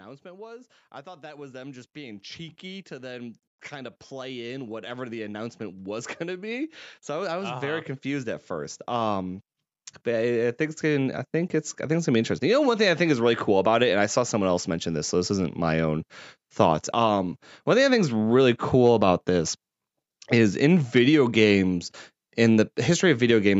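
The automatic gain control judged the speech too quiet and kept raising its gain, an automatic gain rising from 0.22 to 9.45 s (about 18 dB) and again from 10.04 to 12.39 s (about 4 dB). Voice and background swell together, all through the call-processed band that stops at 8 kHz.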